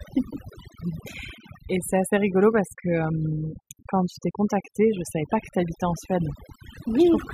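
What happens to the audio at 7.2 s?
At 7.2 s the background has sunk to near silence sprinkled with twinkling specks. This is overdone noise removal, present throughout the clip: an overly aggressive reduction pulls individual frequency bands down wherever they resemble the noise, stripping quieter speech detail along with it.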